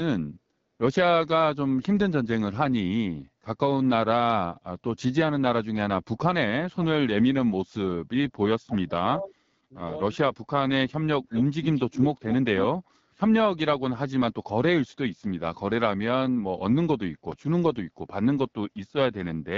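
Throughout, the speech carries the AMR wideband (HD Voice) codec running at 8.85 kbit/s, one of its two lowest modes. The pulse-driven speech model is starved of bits at that rate, so voicing sounds rough and raspy, with a noisy, synthetic-sounding top band above 6.4 kHz.

From 6.7 to 7.1 s and 8.66 to 9.37 s the speech level collapses, by around 40 dB and 35 dB at the deepest, with a brief, shallow dip of about 5 dB at 9.7 s. This fits speech suppressed in double talk: the echo canceller likely mistook simultaneous far-end talk for echo and attenuated everything.

At 11.32 to 11.44 s and again at 11.62 to 12.03 s, a faint copy of the speech trails the original by 199 ms, about 10 dB below it. This is echo leak, likely residual loudspeaker pickup that the far-end canceller failed to remove.

At 17.32 s a DC step produces a single low thump. The waveform's zero line jumps abruptly, and the offset then drains away through a 20 Hz high-pass, so the speech continues unchanged around the click.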